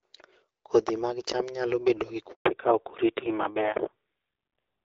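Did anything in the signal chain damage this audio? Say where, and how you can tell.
Yes. At the network stage there is a handover gap. While the call switched networks, no speech frames arrived. Right after "cham nyalo bedo gi" the sound dies away almost at once and stays silent from 2.31 to 2.45 s, a 140 ms hole where speech is lost.

At the codec stage, a fallback to narrowband follows from 2.45 s to the end, as the call leaves HD Voice for an older narrowband codec. Before the switch, the wideband AMR-WB sound is clear. Afterwards nothing above 4 kHz remains, and the speech turns duller and rougher, which fits AMR-NB at around 7.4 kbit/s.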